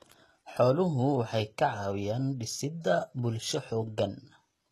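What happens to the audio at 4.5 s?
At 4.5 s the speech carries the damage heard throughout, likely HE-AAC compression near 16 kbps. Treble rebuilt from copied lower bands makes s sounds gritty and metallic. A spectrogram shows a hard ceiling at 12.3 kHz and repeated, blurred texture beneath it.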